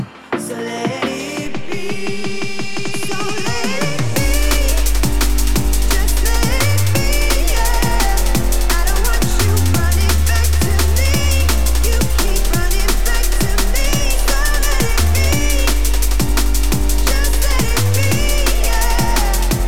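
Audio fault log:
1.46–19.22 s, DC step: the waveform's zero line jumps by about -19 dBFS and holds, giving low thumps at onset and return while the sound continues unchanged.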